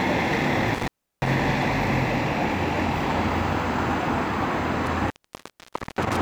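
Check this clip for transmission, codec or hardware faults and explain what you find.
There's a hardware fault here: intermittent contact, twice. Around 0.74 to 1.36 s the sound drops for roughly 0.34 s, then again from 4.86 to 6.18 s for about 0.88 s. A loose plug or cable opening briefly does this: crackle at each break, faint hiss while it's open.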